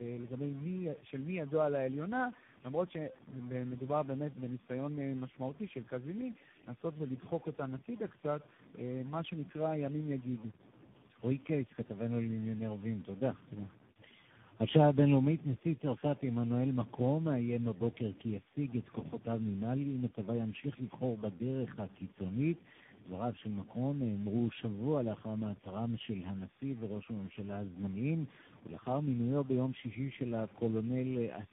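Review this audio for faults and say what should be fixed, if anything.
Throughout the clip there's a distortion riding on the speech, and the pauses aren't clean but filled with a gritty noise floor. That pattern most likely comes from a stuck bit, one data bit held at a fixed value by a broken line or converter. Worth checking the converter and its wiring.

The speech also sounds rough, muffled and warbly from start to finish, with nothing above 3.8 kHz. That's tandem speech coding. The character points to a CVSD link with low-rate AMR-NB and G.711 hops along the way, about four speech coders in a row, each re-encoding the previous one's damage. Keeping the audio in one codec end to end, or passing it through transparently, would avoid that.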